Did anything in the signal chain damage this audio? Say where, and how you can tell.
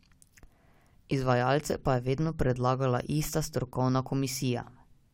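No, nothing along the chain has left an audible mark on this speech, and the signal holds steady throughout, with no breaks, distortion or level disturbances to point to any stage.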